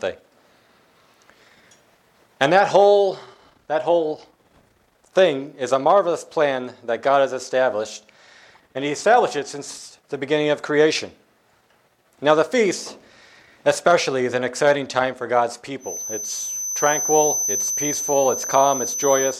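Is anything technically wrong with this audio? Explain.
Yes, there's a feedback whistle from about 15.78 s right through to the end at 19.40 s. A thin, steady tone at around 6.1 kHz sits just a few dB under the main sound and swells and fades slowly in level. It's likely the loudspeaker-to-microphone loop sitting right on the edge of feedback, so that one frequency keeps ringing without building into a full howl.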